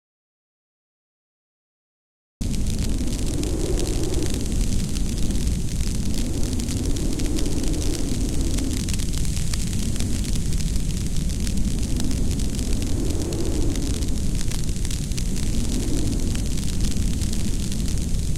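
The clip opens in an audio dropout to silence. From the very start until 2.41 s there is nothing at all. It is silence, with no room tone or hiss underneath. The gap is already under way when the clip begins. At 2.41 s the sound arrives abruptly, mid-flow, with no fade. The likely cause is a lost input, such as a dropped link or a mute, while the recorder kept writing silence. Whatever happened during that gap is gone.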